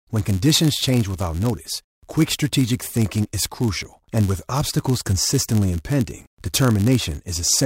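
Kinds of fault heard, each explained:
Block size mismatch (padded): one stage hands on blocks slightly shorter than the next stage reads, and the gap in each is filled with zeros. The speech throughout carries a buzz at about 91.5 Hz, the block rate, and runs at 0.996 speed.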